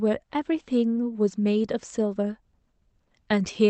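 No technical faults can be heard anywhere in the speech. It arrives through a call codec, with the high frequencies stopping at about 8 kHz, which fits Opus at a moderate bitrate.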